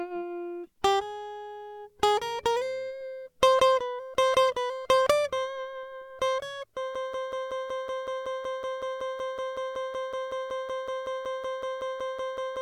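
At 6.95 s the music suddenly locks into a stutter: a fragment 187 ms long plays again and again, back to back, about 30 times, and it continues until the clip ends. This is a broken-record loop. The likely cause is a stall in the player, encoder or stream, which kept resending the last piece of audio it held. Whatever music should have followed 6.95 s never arrives and is lost.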